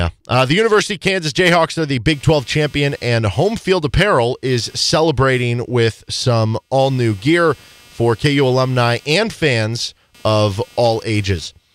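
From about 2.12 s right to the end, there's computer activity noise sitting under the speech: a buzzy, chirping texture pulsing at around 200 times a second, roughly 30 dB below the talker. What's happening is the machine's load shifting, processor, graphics or mouse, and that disturbs the ground the audio circuit shares with it. That's why the buzz follows the computer's activity rather than anything in the speech itself.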